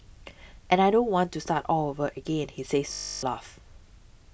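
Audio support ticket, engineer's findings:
Robotic sound from repeated short buffers, 2.93–3.25 s. Speech becomes a rigid metallic 50 Hz buzz, essentially all repeated material. Likely cause: starved playback buffer looping its last chunk, skipping new audio; 50 Hz fits a 20 ms buffer.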